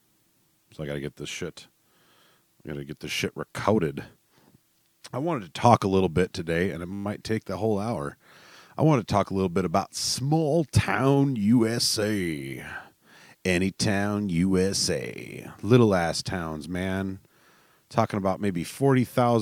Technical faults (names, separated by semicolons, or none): system hang loop